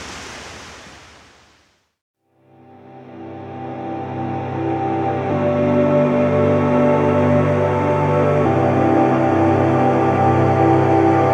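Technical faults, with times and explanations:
Nothing technical stands out here, and there's nothing to flag at any point in the audio.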